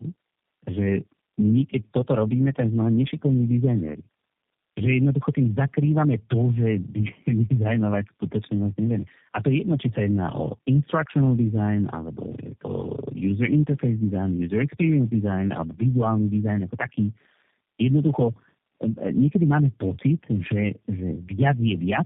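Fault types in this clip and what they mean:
Tandem speech coding: the speech passed through the G.729A coder three times in a row, each pass rebuilding the already degraded output. Throughout, it sounds rough, muffled and warbly. A spectrogram shows nothing above 3.5 kHz and smeared, unstable formant bands.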